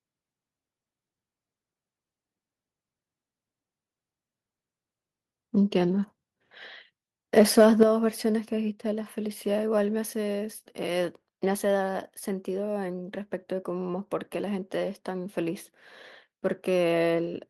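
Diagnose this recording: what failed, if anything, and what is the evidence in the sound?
Microphone overload, 7.39 to 7.83 s: peaks turn harsh and crackly, likely from input gain driving them about 2 dB past the converter's ceiling, flattening their tops.

Microphone volume stepped down at 7.83 s: speech and background drop about 7 dB at once, likely call processing cutting the device's input gain after the clipping.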